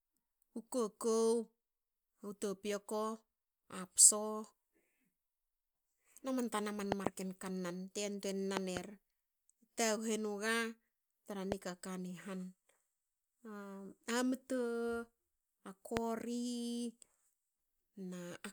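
Loud pops break into this speech at 6.92–7.09 s and 8.57–8.79 s, each a quick double pop, then as single sharp pops at 11.52–11.54 s and 15.97–15.99 s. They jump far above the speech, the last one most of all, while the speech carries on underneath. The likely cause is a sudden voltage step or pulse, from a plug, switch, static or driver glitch, that the downstream circuitry turned into these short thumps.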